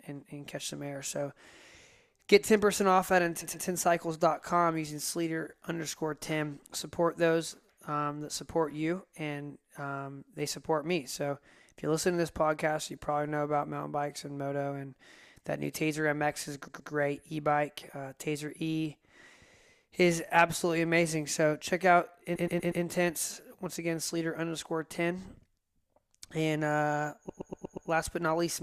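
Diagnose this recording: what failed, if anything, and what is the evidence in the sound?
The speech stream has repeated frames: a short run of compressed frames was written or delivered more than once at the codec or storage stage. The same 120 ms block replays as a stutter at 3.41, 16.67, 22.35 and 27.29 s. It plays two, two, four and five extra times, adding 0.24 to 0.6 s each time.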